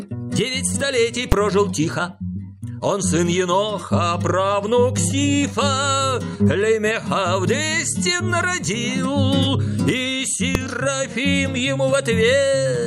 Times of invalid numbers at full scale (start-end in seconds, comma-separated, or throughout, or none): 1.32, 10.55